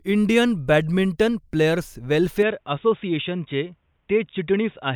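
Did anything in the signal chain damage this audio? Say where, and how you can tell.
Yes. Right after "इंडियन बॅडमिंटन प्लेयर्स", at 2.43 s, the speech abruptly turns dull and boxy, with no gap, through to the end. Nothing remains above 3.8 kHz, loudness holds steady, and faint new noise sits about 50 dB down. This is likely an input switched to a poorer device at the driver stage.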